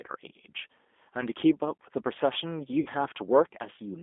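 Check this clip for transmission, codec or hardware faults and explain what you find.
Two faults: a low-bitrate speech codec degrades the whole clip, and a brief packet loss interrupts it near the end.

G.729 codec, throughout: The speech passed through a G.729-type codec, which fits 8 kbit/s. The codec rebuilds each 10 ms frame from a vocal-tract filter, a pitch predictor and a few pulses, so the fine detail of the waveform is discarded. The damage is plainly audible as a rough, slightly synthetic quality, and the line band confines the audio to roughly 250 Hz to 3.5 kHz, making it thin and muffled.

VoIP packet loss concealed by the speech codec, 2.80 to 2.89 s: Part of the stream never arrived, which fits two lost packets carrying about 60 ms of audio. The decoder filled the hole by repeating its last pitch and filter settings while lowering the gain, so the sound smears into a buzzy tone or coloured noise that fades instead of cutting to silence. 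Each frame builds on the previous one, so the speech stays weak or distorted for a short time after the gap.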